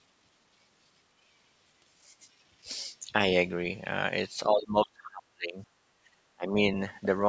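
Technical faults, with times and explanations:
4.49–5.62 s, 6.05–6.16 s and 6.35–6.56 s, speech suppressed in double talk: the speech sinks sharply, by about 30 dB at worst in the long first stretch and around 20 to 25 dB in the two short later ones. This is likely an echo canceller that couldn't distinguish the near talker from the far side's echo and turned both down.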